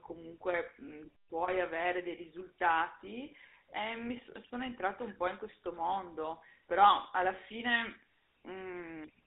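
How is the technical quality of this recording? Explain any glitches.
The recording is narrowband telephone speech with a GSM full-rate codec throughout the whole clip. The band runs only from about 300 Hz to 3.7 kHz. Within it, the voice carries a buzzy, gravelly roughness, because the codec rebuilds speech from a vocal-tract model driven by coarse, evenly spaced pulses, which fits the 13 kbps full-rate scheme. Plain band-limiting would sound muffled but clean. This grainy, rasping texture is what identifies the GSM codec.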